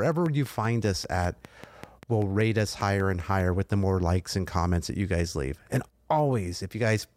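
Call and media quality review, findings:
Train of clicks, 0.06–3.41 s, ending before "with the more likes". Regular ticking at 5.1 per second, about twenty clicks, peaking above the speech. Likely nearby-equipment interference or a faulty connection.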